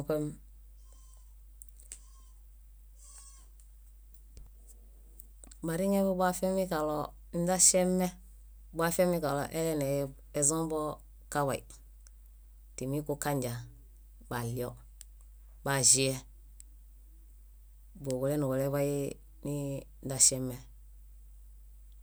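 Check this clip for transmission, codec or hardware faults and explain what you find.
There's mains hum running through the whole clip: a steady 50 Hz tone sitting roughly 25 dB under the speech. It sounds like a power-line ground loop or a transformer nearby leaking into the signal path, giving a constant low drone beneath everything.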